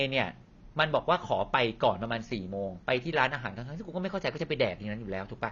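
Right through the speech it sounds dull and smeared, with nothing above 7 kHz, likely AAC compression at a low bitrate, something like 24 kbps.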